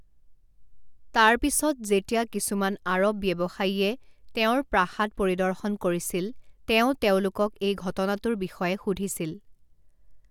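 No technical faults can be heard anywhere in the speech, which comes across as a continuous, intact signal from its first moment to its last.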